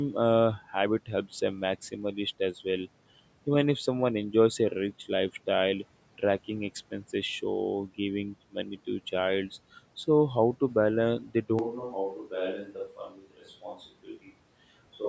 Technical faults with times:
11.59-15.08 switch to a distant microphone
12.97-13.79 speech cut by the noise suppressor
14.04-14.30 speech cut by the noise suppressor

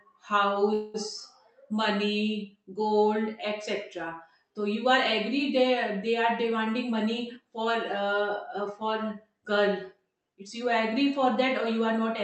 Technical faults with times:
0.73-0.96 call audio freeze
6.44-9.34 jitter buffer speed-up

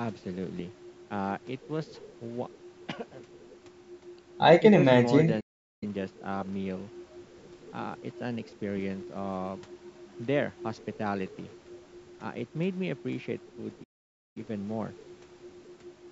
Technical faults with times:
5.40-5.83 playback stall
13.83-14.37 playback stall

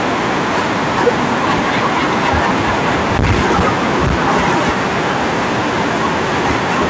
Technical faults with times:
0.00-6.89 hard clipping

